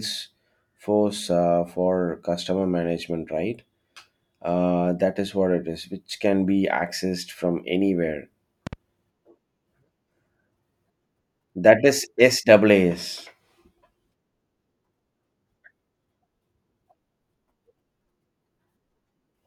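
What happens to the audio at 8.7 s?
A likely electrical disturbance, such as a plug being moved, a switch or a brief driver glitch, injects a sudden voltage step into the signal path between 8.67 and 8.75 s, just after "be accessed from anywhere". The circuitry downstream shapes that step into short pulses, giving a loud pop heard as two sharp clicks in quick succession, peaking roughly 5 dB above the speech. The speech continues underneath without interruption.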